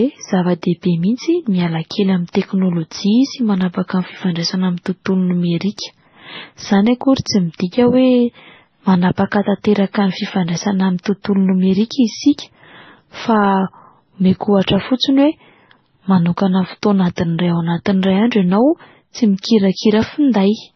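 Across the whole speech clip, nothing is present above 6 kHz, and the remaining band carries swirly, warbling smear layered with a hard, metallic edge. This points to transcoding between lossy codecs, most likely an MP3 encode passed through Vorbis and then AAC-LC at very low bitrates, each stage re-encoding the previous one's artefacts. On a spectrogram, the energy stops at a flat ceiling at 6 kHz, and the band below shows blotchy, fragmented patches.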